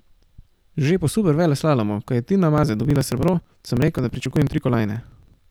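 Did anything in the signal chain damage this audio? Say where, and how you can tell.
Yes. Periodic USB or driver dropouts damage the speech from 2.58 s to 5.44 s: regular clicks every 54 ms, about 18 per second, heard only over signal. Something is stalling the USB bus or driver, and roughly 10 ms of audio is skipped each time.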